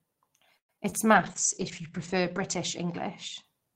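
From 0.57 to 0.94 s the speech breaks up under repeated packet loss: four gaps, the longest about 116 ms. Roughly 40% of that stretch is filled by stretching the last sound, so it turns choppy with pieces missing rather than showing a single clean dropout.

From 1.14 s to 3.72 s a call bitrate drop sets in. The high end narrows to about 8 kHz and the speech grows rough and watery, worst for about 1.2 s, which fits a fall toward 9 kbps. It stays continuous throughout, with no holes, unlike the packet loss.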